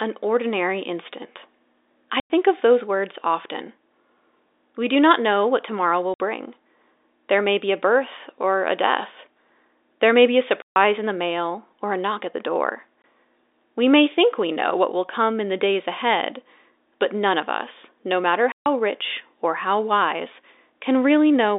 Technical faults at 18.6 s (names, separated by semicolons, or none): packet loss filled with silence